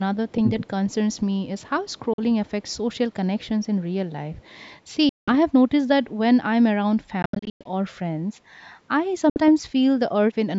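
A faint, delayed copy of the speech trails the talker at 0.29 to 1.17 s, then again at 1.59 to 1.99 s, 2.46 to 2.97 s, 3.39 to 3.66 s and 4.34 to 4.59 s. It lags a steady 340 ms behind and sits roughly 35 to 40 dB under the main speech. This is echo leak. Its likely cause is a loudspeaker on the far end whose echo canceller let part of what its microphone heard pass back into the call.

Inside the first echo stretch, between 0.41 and 0.62 s, the talker's own speech sags and briefly thins, dropping by about 15 dB at its lowest over roughly 150 ms in total. This is speech suppressed in double talk. The echo canceller was likely unable to tell the talker apart from the returning loudspeaker sound while both were present, so it pulled the level of both down together.

Four sudden silent holes interrupt the audio at 2.13 s, 5.09 to 5.35 s, 7.22 to 7.67 s and 9.30 to 9.39 s. When the sound comes back, it has moved on as though it kept playing through the gap. 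These are Bluetooth dropouts, and the likely cause is packets failing to reach the headphones on time. The first gap is about 46 ms, the second about 183 ms and the last about 61 ms. The third is broken into several pieces totalling about 274 ms, with the longest single piece lasting about 107 ms.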